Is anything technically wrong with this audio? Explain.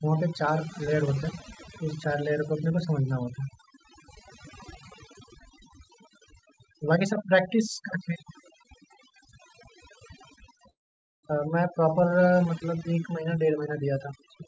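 Yes, three faults are audible in this speech clip, which carries no content above 8 kHz, as expected from a G.722 call path.

Overdone noise removal affects the whole clip. The suppressor was set too aggressively, so bands near its noise estimate are pulled far down or removed along with quiet speech detail. The background becomes near-silent with twinkling specks.

Call audio freeze, from 10.70 to 11.25 s: the last sound is briefly extended, then there is about 0.49 s of silence before speech resumes exactly where it stopped. Nothing is lost, but 0.53 s of delay is inserted. The likely cause is late packets draining the jitter buffer.

Jitter buffer speed-up, from 14.38 to 14.47 s: the buffer had built up excess audio, so the receiver cut short pitch-period segments, about 50 ms in total. Speech plays at roughly 152% speed with unchanged pitch and sounds briefly hurried.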